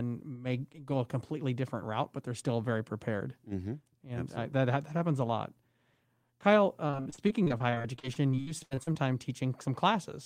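Repeated packet loss (robotic sound) runs from 6.87 to 8.97 s: a rapid string of lost or late packets, each hole up to 78 ms, was patched by stretching the preceding speech, covering about 30% of that span, so it turns choppy.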